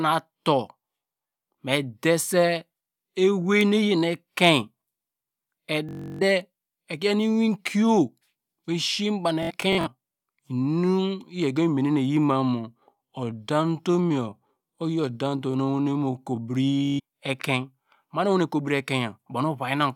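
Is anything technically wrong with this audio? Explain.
Yes, the speech has two kinds of technical fault: Bluetooth stutter in three places and one time-stretched section.

Bluetooth stutter occurs from 5.89 to 6.22 s, 9.43 to 9.87 s and 16.85 to 17.00 s. When packets go missing, the receiver replays its last short buffer. That produces a buzzing, machine-gun repetition rather than the silence of a plain dropout. The first gap covers about 320 ms, which fits roughly fifteen lost packets of about 21 ms each. The second is scattered over about 430 ms, with runs up to 64 ms. The third lasts about 130 ms. After each, the speech resumes further along, as though it had kept playing.

From 12.27 to 16.53 s the pace abruptly slows to about 0.74 times normal speed while the pitch stays put. That points to a time-stretched section, likely software lengthening the audio by repeating short pieces. 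Slow playback would instead lower the pitch.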